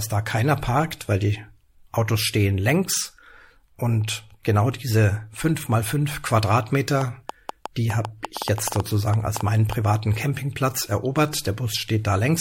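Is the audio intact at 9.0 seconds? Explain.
No. At 9.0 seconds there is irregular ticking over the speech, about 6.6 sharp clicks per second, some peaking roughly 10 dB above the speech level. This train of clicks runs from 7.01 to 9.73 s and is likely caused by interference injecting repeated pulses.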